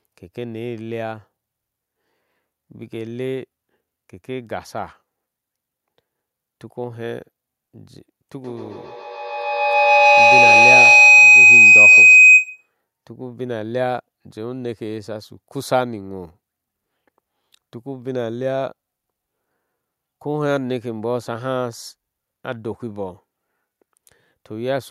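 From 8.42 to 12.74 s the speech is swamped by a feedback howl, peaking about 14 dB above the speech. The sound passes from microphone to loudspeaker and back with gain on every trip, so each return grows and narrows to a shrill tone around 3 kHz, pulsing roughly every 150 ms. A spectrogram shows one bright horizontal band near 3 kHz with a dashed, throbbing texture, and the waveform swells into a dense block.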